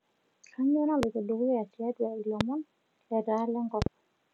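Speech clip with loud pops at 1.03–1.05 s and 2.41–2.43 s, and a double pop at 3.82–3.89 s, the first two jumping roughly 20 dB over the speech and the double pop about 15 dB, likely from switch or static voltage spikes.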